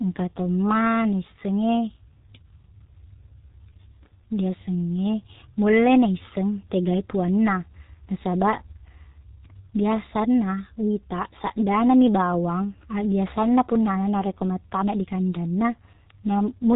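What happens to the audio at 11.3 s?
At 11.3 s you're hearing the same G.723.1 codec damage that runs through the whole clip. The speech is squeezed through a very low-rate voice coder, which fits roughly 6 kbit/s, chopped into 30 ms frames with a slowly updated voice model. Nothing gets through above 3.8 kHz, so the speech comes out muffled and hoarse, and the consonants smear together.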